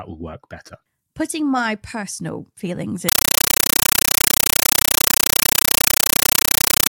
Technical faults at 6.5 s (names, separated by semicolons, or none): compressed stream played as audio